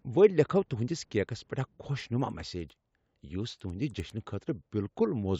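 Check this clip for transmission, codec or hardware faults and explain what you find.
One fault, between 1.9 and 4.3 s: the resampler restarted on every block. Each 100 ms block, consistent with a 16 kHz to 48 kHz conversion, was converted separately, leaving edge errors that tick at 10 Hz while speech is present. Spectrograms show faint vertical lines every 100 ms.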